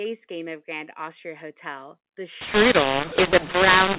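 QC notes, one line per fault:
2.41–3.98 s, mu-law and A-law mixed up: mu-law telephone audio decoded as A-law, so levels scramble, speech turns harsh and gritty, and quiet gaps fill with noise.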